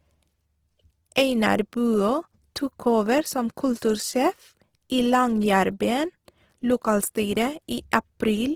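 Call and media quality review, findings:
Opus compression, likely cause. Speech grainy and rough for the whole clip. Little swirl. Bands filled with noise or folded copies when bits run short. Full bandwidth kept. Damage plainly audible, which fits music-mode Opus near 16 kbps.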